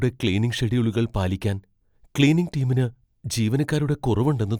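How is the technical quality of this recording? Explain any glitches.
No glitches can be heard anywhere in the recording. The speech runs without any interruption or audible fault.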